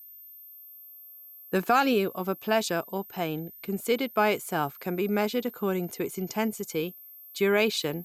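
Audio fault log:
throughout: switching supply whistle, a thin high tone wandering between 13.3 and 13.4 kHz about 20 dB below the speech, from a power supply cycling in an audible burst mode or beating with another supply. On a spectrogram it is a faint, slightly wavering horizontal line across the entire clip.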